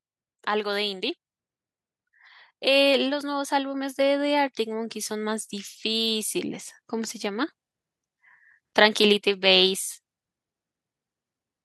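No technical faults can be heard anywhere in this speech recording.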